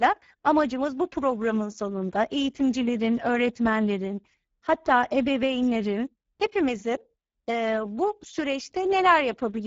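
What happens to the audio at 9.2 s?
At 9.2 s the speech carries Speex codec damage that runs through the whole clip: starved excitation at a rate pointing to about 10 kbps makes it hoarse and noisy. A spectrogram shows a hard ceiling near 7.7 kHz, with smeared, noise-like texture above 4 kHz.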